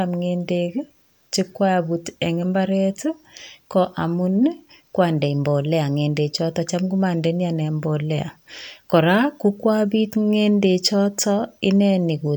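No technical faults are audible anywhere in this speech recording.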